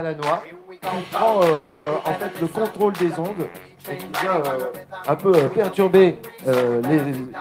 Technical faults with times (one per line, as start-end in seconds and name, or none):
1.53-1.88 call audio freeze